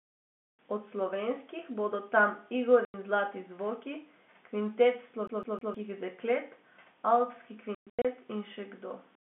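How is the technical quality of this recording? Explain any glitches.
The recording has two kinds of glitch: dropouts from packet loss and a short skipping-CD stutter. The G.711 telephone band of 200 Hz to 3.5 kHz sounds clean.

Packet loss filled with silence occurs at 2.85 to 2.94 s, between "slovenskih bodo tam" and "in zlati zvoki". A hard-edged 90 ms gap fits three lost 30 ms packets. Later, about 240 ms drops out in scattered gaps across 7.75 to 8.05 s, the longest 120 ms. On the waveform these are flat, sharp-cornered holes.

The CD is stuck on one turn from 5.27 to 5.74 s. The same 157 ms slice repeats three times, with a brief mute at each jump back. This gives a fast, even stutter, and the spectrogram shows an identical block pattern three times over.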